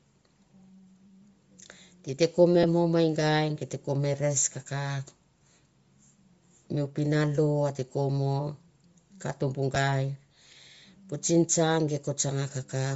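The clip is speech with two kinds of damage. Across the whole clip there is plainly audible coding damage, likely from Bluetooth LC3 compression. The upper spectrum sounds thinned and replaced by noise. This gives the voice a breathy, grainy edge. The grain fits a low rate of around 32 kbps, with the codec working in 10 ms frames. At that rate, much of the top band has too few bits and gets noise-filled instead. The second fault is lost LE Audio frames, heard twice. The first falls between "di te ko me" and "mo me", from 2.63 to 2.65 s. The second comes at 9.75 s. Each gap is about 10 ms, which fits a single missing frame. The decoder covers each one by reusing the previous spectrum with scrambled signs. So there is no silence, only a brief noisy smear where the voice loses its clear tone.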